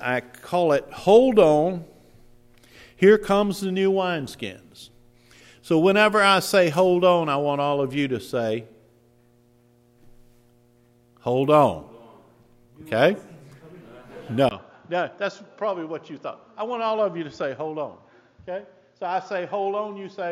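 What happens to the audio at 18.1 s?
At 18.1 s the recording is inside a stretch that most likely comes from the input switching to a poorer device, running from 14.49 s to the end of the clip. The new input passes nothing above 7.1 kHz, so the sound turns duller and boxier. It arrives after a 20 ms gap at the changeover, sits about 5 dB quieter, and carries a faint, different background noise well beneath the signal.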